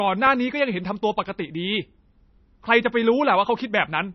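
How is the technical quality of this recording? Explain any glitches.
The recording is heavily degraded by lossy coding throughout. MP3 compression, running the whole length of the speech, is the likely cause. Starved of bits, the encoder drops everything above 5.9 kHz and lets weak frequency lines flicker between frames, consistent with roughly 24 kbps, so the sound is dull, watery and swirly, with smeared s sounds and consonants.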